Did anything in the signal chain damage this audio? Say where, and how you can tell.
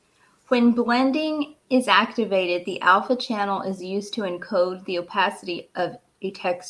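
No, nothing in the signal chain has left an audible mark on this speech recording. I can't point to any stage between capture and playback where the sound was altered.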